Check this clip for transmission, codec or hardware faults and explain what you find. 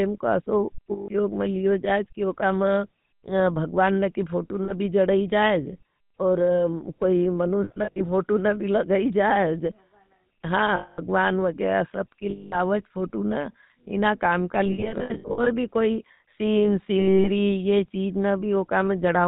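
Yes, there are two problems, both from a GSM phone path. The whole clip has gone through the GSM full-rate codec, and it has lost GSM frames in seven places.

The GSM full-rate codec runs the entire clip. It models the vocal tract and excites it with sparse, regularly spaced pulses, so the speech comes out clearly buzzy and gravelly, with nothing above 4 kHz. That's consistent with the 13 kbps full-rate coder.

Lost GSM frames show up at 0.92 to 1.08 s (just before "में लियो"), 4.64 to 4.73 s (before "भी जड़ाई"), 7.64 to 8.02 s, 10.76 to 11.0 s, 12.3 to 12.57 s (before "फोटो ना"), 14.66 to 15.48 s and 17.0 to 17.29 s. The decoder reuses the last good frame, so each gap becomes a rough, metallic ring. The 7.64 s and 14.66 s stretches are scattered short runs rather than one solid hole.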